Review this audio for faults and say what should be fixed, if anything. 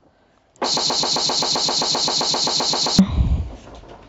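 From 0.77 s to 2.99 s the speech stutters mechanically: a single fragment of about 0.13 s plays back to back 17 times, giving a rapid, machine-gun buzz of the same sliver of sound. This is a broken-record loop. The likely cause is that the player or stream stalled and kept resending the last chunk it held, so the speech that belonged in those two seconds is missing. To prevent it, add stall detection that outputs silence or resynchronises instead of repeating the held buffer.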